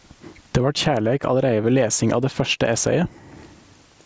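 Gain pumping runs throughout: the gain swings by around 25 dB, likely from excessive input gain driving a fast limiter.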